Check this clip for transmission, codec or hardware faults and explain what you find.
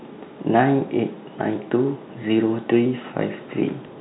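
No transmission, codec or hardware faults.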